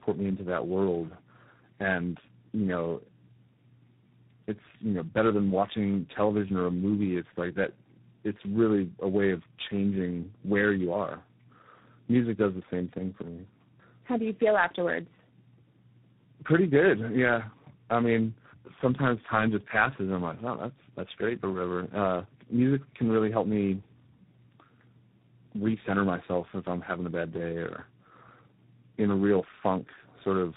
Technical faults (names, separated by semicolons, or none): tandem speech coding